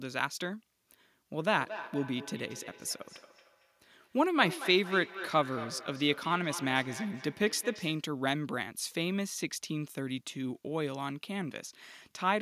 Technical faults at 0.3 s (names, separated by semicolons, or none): none